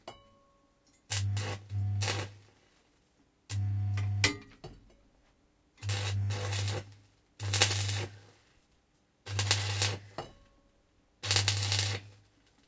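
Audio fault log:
Nothing to log here; no faults turn up anywhere in the sound.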